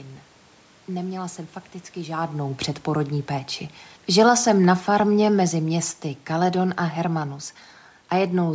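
From 4.06 s to 7.28 s, just after "fakticky žádnou předporodní péči", automatic gain falling pulls the speech down by about 5 dB as the gain control reacts to a loud input or strong background noise. The room noise sinks along with the voice, which separates it from the talker movement near 2 s.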